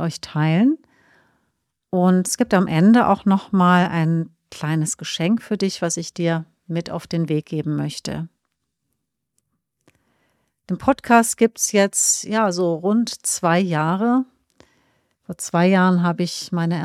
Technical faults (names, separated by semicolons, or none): none